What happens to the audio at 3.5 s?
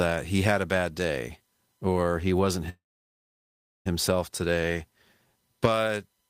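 At 3.5 s the speech is stopped dead inside a call audio freeze that runs from 2.69 to 3.88 s, just after "day or he wasn't". The last sound trails off briefly before about 1.07 s of silence, then the sentence resumes exactly where it left off, with nothing lost but roughly 1.16 s of extra delay. The likely cause is packets stalling in transit so the jitter buffer emptied and the receiver padded the wait.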